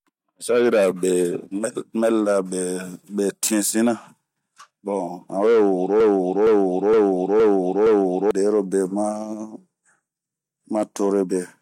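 Speech with a broken-record loop from 6.00 to 8.31 s. A 0.47 s fragment repeats five times back to back. A stalled player or stream is the likely cause, and the audio due in that span is lost.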